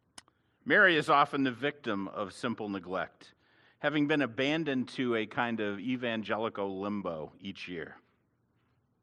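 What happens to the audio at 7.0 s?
At about 6.99 to 7.03 s there is a short concealed packet loss: roughly 20 ms of audio never arrived in time, and the receiver filled it by extending the preceding sound before blending back. It comes across as a brief smear or wobble rather than the silent gap or hard click of an unconcealed dropout.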